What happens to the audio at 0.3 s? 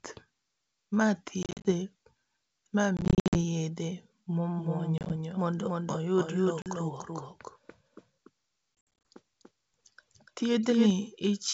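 Nothing goes wrong at 0.3 s: the speech there is intact, carried through G.722 wideband telephone coding at 64 kbit/s, which leaves little or no audible trace.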